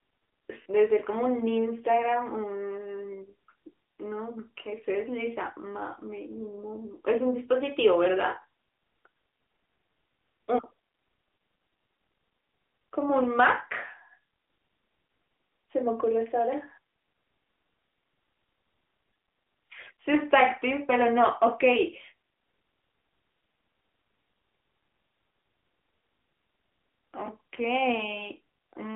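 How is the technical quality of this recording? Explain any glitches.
The quality is limited by narrowband mobile coding, with one brief glitch near the start.

AMR narrowband mobile codec, throughout: the speech is squeezed into a telephone band, and the coding damage is plainly audible, buzzy and synthetic, consistent with a mid-rate AMR-NB mode around 10 kbps. A spectrogram shows energy only from about 250 Hz to 3.5 kHz, with nothing above 3.7 kHz.

Repeated buffer, 0.62 to 0.66 s: a 20 ms segment plays two extra times, heard as a quick stutter. About 40 ms of new audio never arrives, and the waveform shows identical copies with hard joins.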